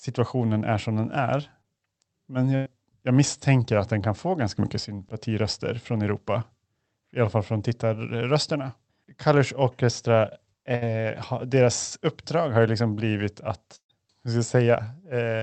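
At 1.61 s, right after "är som den är", a short concealed packet loss drops about 20 ms of audio. The receiver fills the hole by extending the last sound for roughly 22 ms before blending back into the real signal, which produces a brief smear. The waveform shows a short stretch that looks too regular.

Three bursts of packet loss follow. From 2.56 to 2.68 s, just before "jag misstänker att den", about 100 ms is lost and replaced by about 101 ms of continued, fading sound. It is heard as a held sound that leads straight into the resumed speech. From 10.76 to 10.83 s a shorter burst of about 60 ms gives the same held, decaying sound. The longest runs from 13.75 to 13.91 s, between "har ju liksom blivit" and "hur ska". There about 140 ms is missing, and the concealed sound fades into roughly 90 ms of silence. Spectrograms show smeared, static content that fades out, with a flat gap in the last burst. 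The waveform shows an envelope that decays smoothly and then jumps back to the real speech.

Throughout, the Opus call path's band limit appears as an empty spectrogram above 8 kHz.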